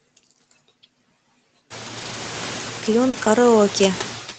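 Noise suppressor artifacts run through the whole clip. The suppressor pulls down whatever frequency bands it judges to be steady noise, by about 14 dB, deciding afresh on every frame. The room noise climbs at around 1.5 s, and the residue drops away in pauses and surfaces under the speech. Because it is continuous and follows the level of the speech, it is easy to tell apart from the brief packet events.

From 1.97 to 2.15 s comes a lost packet rebuilt from error correction. About 100 ms of audio, which fits roughly five packets, failed to arrive. The decoder played the low-bitrate backup copies carried in the following packets, so nothing drops out. The passage simply turns coarser and grainier for a moment. Since the call is limited to 8 kHz, there is no high-frequency dip to listen for, only the roughness.

From 3.09 to 3.15 s there is a short concealed packet loss. Here about 40 ms had no backup, and the decoder invented audio by extending the preceding sound before blending back in. 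The result is a small smear or wobble rather than grain, which is what separates it from the rebuilt sections.

Overlapping its end, from 3.13 to 3.27 s, error correction again reconstructs about 80 ms. This produces the same brief roughness heard earlier, without a gap.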